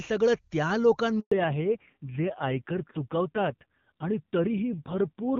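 This is a speech clip carried over a phone call, and at 1.20 s, just after "सगळं त्या", it suffers a handover gap. The call moves from one network to another, and for 0.12 s no speech frames arrive, so the voice cuts out until the new link takes over at 1.32 s. Unlike packet loss concealment, nothing smeared or repeated fills the hole; it is clean silence, and what was said during it is lost. From 1.32 s to the end the call stays in a fallback to narrowband. Before the gap the AMR wideband (HD Voice) codec sounds clear and full, which fits a high AMR-WB rate. After it, nothing is left above 4 kHz, and the voice is dull and rough. The roughness comes from an older narrowband codec running at a low rate, which points to something near 6 kbit/s. A simple low-pass filter would dull the sound without adding that grit, and here the change arrives at the handover, not gradually.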